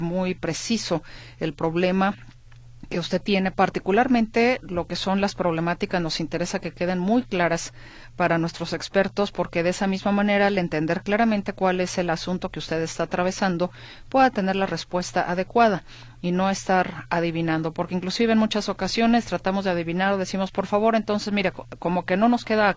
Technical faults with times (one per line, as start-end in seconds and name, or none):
none